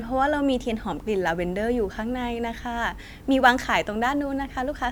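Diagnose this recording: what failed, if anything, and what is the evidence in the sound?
A fine hiss and roughness rides on the speech from 0.93 s to 4.85 s, thickening on loud and sibilant passages and dropping away in pauses. This is sample clock jitter at the converter: timing wander of a few microseconds misplaces samples, leaving an error roughly 35 dB below the signal that tracks waveform steepness.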